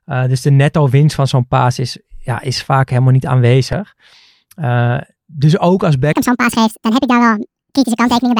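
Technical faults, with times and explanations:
3.72 s, damaged data in a compressed stream: right after "is vaak helemaal niet" a brief glitch cuts into the speech. A corrupted frame made the decoder misread its contents and lose sync, and it resynchronised at the next valid frame header.
6.12 s to the end, section at the wrong speed: after "dus ook als" the speech suddenly runs 1.74 times too fast and its pitch jumps by close to ten semitones, so it sounds high and hurried until the clip ends. The likely cause is that this stretch was played or edited against the wrong clock. A pitch-shift fault would move only the pitch, but here the timing and the pitch change together, which shows the speed itself is wrong.
7.60–7.63 s, damaged data in a compressed stream: inside the sped-up stretch another short glitch of about 30 ms breaks the sound. As at 3.72 s, the decoder hit corrupted frames, could not decode them properly and had to find the next frame header again. 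The sudden glitch stands apart from the steady speed change around it.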